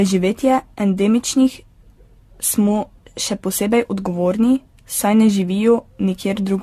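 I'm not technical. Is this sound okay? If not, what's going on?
No. Generation loss runs through the whole recording: the speech sounds swirly, hollow and smeared, with blurred consonant starts and nothing above 13.8 kHz. It was likely squeezed by a lossy format, unpacked and squeezed again about seven times, each pass adding fresh damage.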